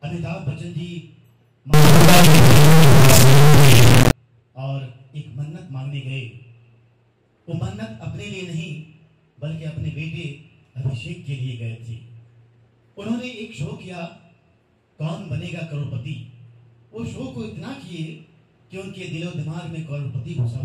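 Integer read as float, from 1.74 s to 4.11 s: the audio turns into an extremely loud, harsh buzz with a square-wave character. The sound is consistent with 32-bit integer samples being interpreted as 32-bit floating-point values. Each reinterpreted sample lands either near zero or far beyond full scale, so the output slams between silence and the clipping ceiling instead of following the waveform.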